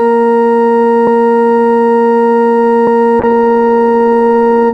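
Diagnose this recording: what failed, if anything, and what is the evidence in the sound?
Buffer stage: the music jumps ahead at 1.07 s and 2.87 s, losing about a fifth of a second each time, likely audio missing between chunks.

Codec stage: a call bitrate drop from 64 to 22 kbps at 3.21 s makes the music coarse and muffled to the end, bandwidth falling from 20 to 12 kHz.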